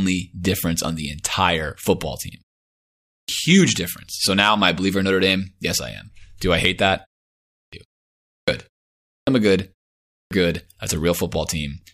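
At 2.96 s, just after "the entire football team", speech resumes from a 0.61 s pause with its onset missing: a clipped start after a pause, about 0.32 s swallowed while the output path woke and relocked. The same happens at 7.38 s after "I hate that" (0.35 s lost), then at 8.17, 8.95 and 10.0 s (about 0.31 to 0.32 s each), following pauses of only 0.34 to 0.4 s. Each phrase jumps in abruptly, its first sounds gone.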